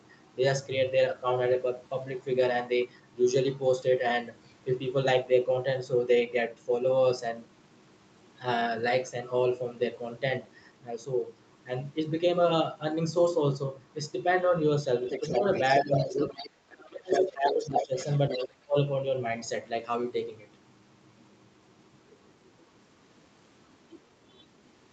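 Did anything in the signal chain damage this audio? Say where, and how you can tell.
Yes. A second, fainter talker leaks into the recording. At 15.09–16.5 s it sits about 10 dB below the main speech. It comes back louder, about 5 dB down, at 17.12–17.21 s and 17.47–18.46 s, with a faint trace around 22.46–22.5 s. This is the other side's voice leaking through, likely residual echo that the call's echo canceller failed to subtract from the loudspeaker pickup. Crosstalk from wiring would be continuous. This comes and goes with the far side's turns.

The main talker is also pushed down while the other voice is present. It dips by about 10 dB at 15.78–16.25 s, then falls by about 25 dB across 16.7–17.94 s and by about 30 dB at 18.45–18.77 s. This is speech suppressed in double talk, with the canceller's suppressor likely clamping both voices when it could not separate them. Packet-loss dropouts would land at random. 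These gaps cluster around the leaked voice.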